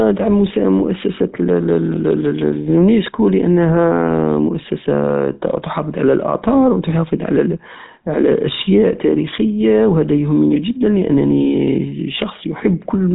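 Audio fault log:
Throughout: GSM full-rate codec. The speech has a plainly audible buzzy, gravelly roughness from pulse-driven excitation, nothing above 3.8 kHz, consistent with a 13 kbps GSM coder.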